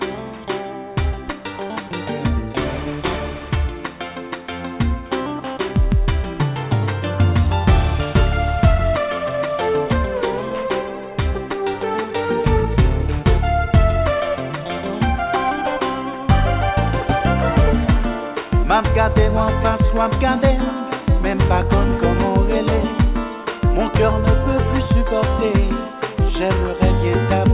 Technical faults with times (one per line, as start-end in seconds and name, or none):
none